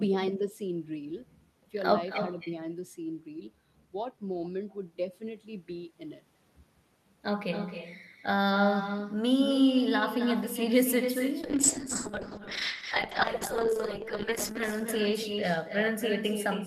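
From the start and through the whole clip, every phrase is trailed by a quieter, thinner copy arriving about a third of a second later and sitting about 8 dB below the direct speech. This is echo with no canceller: the far end played the call over a loudspeaker, its microphone picked that playback up, and nothing removed it, so the talker's own sound returned after the round trip through the network.

At 11.43 s the sound turns coarse and watery, and the upper range, which until then reached up to about 12 kHz through the Opus call path, dulls noticeably. It stays degraded to the end of the clip, at its worst for about 2.83 s. This is a call bitrate drop. The bandwidth estimate fell and the encoder was told to spend far fewer bits, which fits a fall from around 40 kbps to around 8 kbps. At that rate Opus quantises coarsely and trims the high frequencies.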